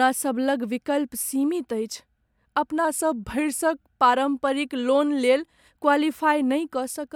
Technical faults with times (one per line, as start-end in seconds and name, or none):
2.85-3.86 drift correction step